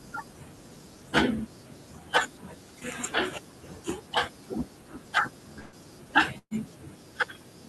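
A speech recording with two short dropouts: at 5.59 to 5.75 s the sound smears into a brief held buzz or fading hiss, and at 6.38 to 6.54 s it does the same before falling briefly silent, with speech jumping ahead each time. Both are a burst of packet loss. The receiver stretched and faded the last sound to cover roughly 0.12 s per gap, and about 120 ms of speech is missing each time.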